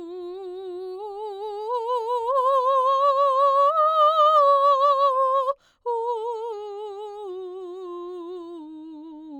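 Across the whole music clip there is imaging from linear upsampling, consistent with a rate change from 24 kHz to 48 kHz done by straight-line interpolation between samples. That interpolator filters poorly, so the top of the original band is softened and a mirrored copy of the spectrum survives between 12 kHz and 24 kHz, about 45 dB below the music. It is heard as a faint metallic shimmer riding on bright, high-frequency content.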